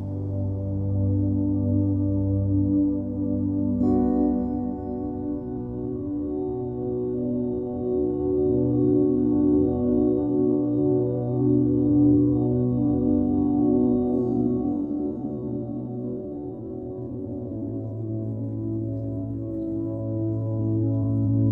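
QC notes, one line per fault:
5.43 to 21.5 s, time-stretched section: From here to the end, the pace abruptly drops to about half speed while pitch holds steady. Short pieces are likely being repeated by stretching software to fill time. That is why the sound drags.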